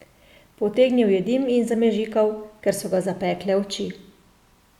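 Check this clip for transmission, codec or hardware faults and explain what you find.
Nothing here points to a transmission, codec or hardware problem; the speech comes across steady and intact the whole way.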